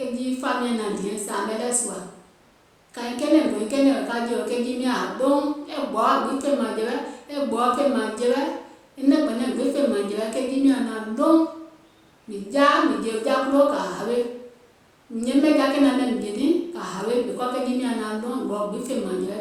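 Listening to the speech recording, nothing stood out as a technical fault at any point.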